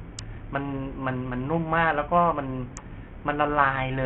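From start to finish, the speech was likely passed through Bluetooth SBC compression at a very starved setting, something near 48 kbps. With so small a bit budget, the codec's upper sub-bands receive little or nothing, and the remaining bands are quantised coarsely. The result is heavy damage: the treble thins out and flickers in and out, and a gritty, grainy noise and aliasing ride along with the speech.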